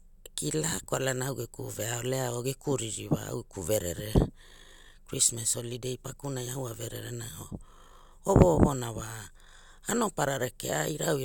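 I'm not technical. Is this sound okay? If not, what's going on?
Yes, this recording is technically sound, with nothing wrong in the signal that would get in the way of listening.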